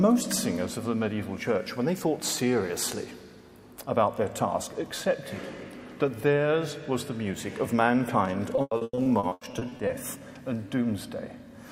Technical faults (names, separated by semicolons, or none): repeated packet loss (robotic sound)